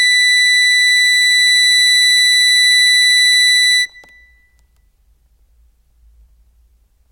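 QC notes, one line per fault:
No faults detected in the music; nothing to log.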